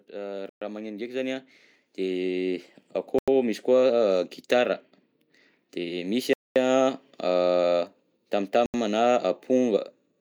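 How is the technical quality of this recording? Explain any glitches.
The recording has two problems: a gain ramp at the start and four brief dropouts to silence.

Automatic gain rising, 0.06 to 3.69 s: the automatic gain control judged the incoming level too low and kept turning itself up over more than three seconds, adding about 13 dB in total. Because the gain acts on the whole signal, the speech and the background noise both grow steadily louder together, so the opening sounds as if it is slowly fading in.

Bluetooth stalls at 0.49 to 0.62 s, 3.19 to 3.28 s, 6.33 to 6.56 s and 8.66 to 8.74 s: the likely cause is radio interference holding back audio packets, so the headphones' buffer emptied and playback paused until the delayed data arrived. Each stall is a hard cut to silence lasting 120 ms, 91 ms, 225 ms and 80 ms respectively, after which the speech resumes abruptly.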